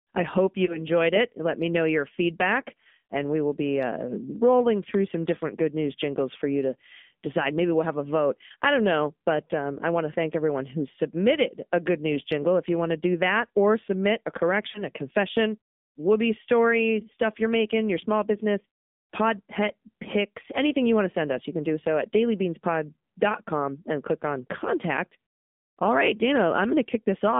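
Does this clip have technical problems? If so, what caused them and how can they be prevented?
Yes. The speech went through an AMR narrowband mobile codec at 7.4 kbps. Its pulse-driven vocal-tract model and a line band of 150 Hz to 3.6 kHz give plainly audible buzzy, synthetic, muffled speech. To prevent this, carry the call over a wideband or higher-bitrate codec such as AMR-WB.

There are also lost AMR speech frames. Corrupted frames made the decoder repeat its last pitch and tract settings at falling gain, causing brief warbling dips at 0.66–0.78 s after "I hope" and at 14.72–14.84 s after "that or submit a", just before "a confession whoopee story". Each fits a single lost 20 ms frame. To prevent this, improve radio signal quality or add stronger error protection on the link.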